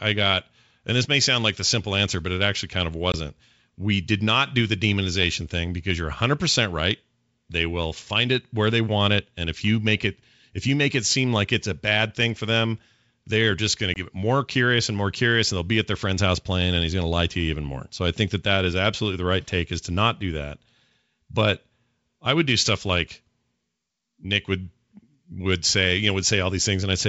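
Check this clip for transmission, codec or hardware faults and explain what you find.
There's packet loss on an ADPCM call, at 3.12 to 3.16 s and again at 13.94 to 14.00 s. Each time about 20 ms of speech, roughly one packet, drops out as a hard-edged silent gap. The decoder's adaptive predictor and step size then lose sync with the sender, so the speech comes back with some distortion that settles within a few tens of milliseconds. The G.722 wideband coding underneath sounds clean, which fits its full 64 kbit/s mode.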